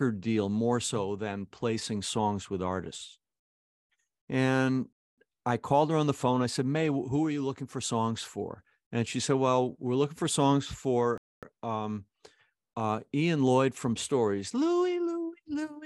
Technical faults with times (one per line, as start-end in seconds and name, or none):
4.93-5.18 gap between chunks
11.18-11.43 gap between chunks